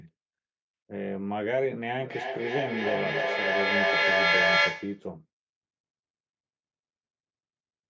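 From 2.0 to 5.13 s, a feedback echo between two devices: one device replays the other's microphone, which recaptures it, so speech repeats about every 0.3 s and builds to about 8 dB above the speech.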